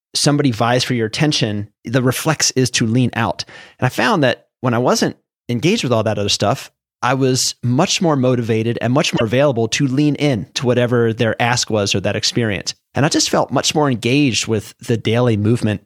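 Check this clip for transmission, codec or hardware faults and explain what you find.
One fault is present: damaged data in a compressed stream, from 9.13 to 9.22 s in the speech. For about 80 ms the decoder hits corrupted frame data, misreads it, loses sync and hunts for the next valid frame header. The result is a brief glitch that breaks the flow. On a spectrogram it appears as a short vertical disturbance unrelated to the surrounding harmonics; the waveform shows an abrupt discontinuity there.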